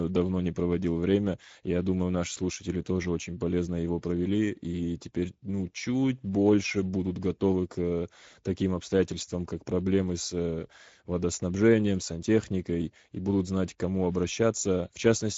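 Speech processed throughout by the Speex codec, with plainly audible hoarse, noisy coding damage consistent with a bitrate of about 16.8 kbps. A spectrogram shows nothing above 7.7 kHz.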